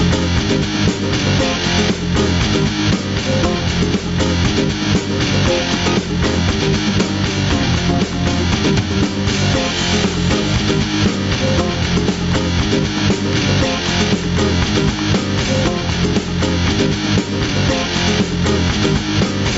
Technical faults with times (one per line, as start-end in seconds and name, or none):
0.00-19.58 gain pumping